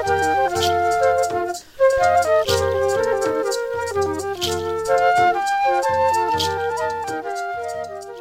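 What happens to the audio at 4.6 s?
Nothing goes wrong at 4.6 s; the audio plays through that moment intact, with no fault to be heard.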